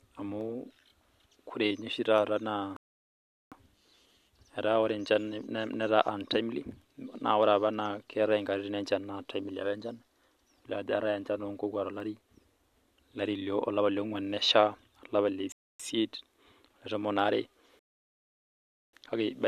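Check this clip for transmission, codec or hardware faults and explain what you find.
Two kinds of fault are present in this speech recording: isolated clicks and pauses that interrupt playback.

Sharp single clicks occur at 0.41, 2.18, 8.13 and 12.00 s. These are likely dropped samples. A tiny fraction of a millisecond is missing, so the waveform jumps abruptly to a later value. The jump produces a click without removing any audible sound.

The speech cuts to silence three times and then picks up exactly where it left off: 2.77 to 3.52 s (752 ms), 15.52 to 15.80 s (274 ms), and 17.79 to 18.93 s (1.14 s). These are rebuffering stalls. The player exhausted its downloaded audio and waited for more to arrive, adding time without losing any content.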